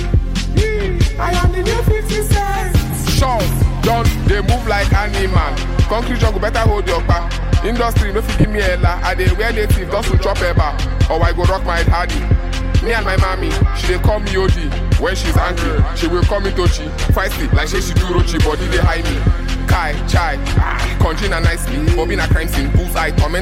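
Lost LE Audio frames occur at 2.91 to 2.93 s, 8.41 to 8.44 s and 18.59 s, gaps of 20, 30 and 10 ms that fit two, three and one 10 ms frames. The LC3 decoder fills each hole by reusing the last spectrum with randomised signs, so the sound briefly turns into a noisy smear. The light lossy compression of the stream sits underneath throughout.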